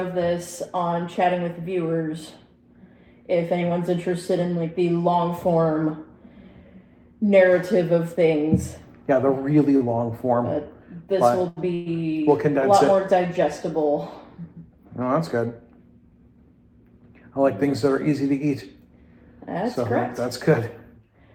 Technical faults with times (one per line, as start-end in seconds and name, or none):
9.77-9.96 short stall from a late packet
11.48-11.58 short stall from a late packet
11.74-11.88 call audio freeze
15.30-15.79 jitter buffer speed-up